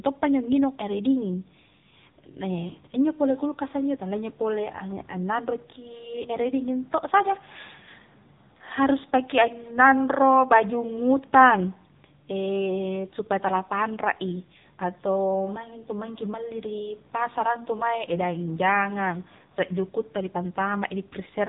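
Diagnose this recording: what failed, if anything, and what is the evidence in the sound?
The failure is at the codec stage. The whole clip went through the AMR narrowband mobile codec. A spectrogram shows a hard ceiling at 4 kHz. The heavily buzzy, synthetic speech points to a low mode near 6.7 kbps, where sparse pulses excite a vocal-tract model.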